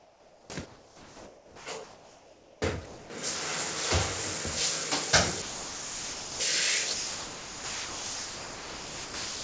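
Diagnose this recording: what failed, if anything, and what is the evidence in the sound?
Comfort noise in place of the background at 0.00–0.50, 0.66–1.66 and 1.84–2.62 s: flat, featureless hiss about 3–5 dB quieter, likely the call path's discontinuous transmission.

Sound dropped by the voice detector at 2.86–3.10, 5.42–6.40 and 6.94 s to the end: real sound gives way to steady noise, likely because the detector misjudged it as background.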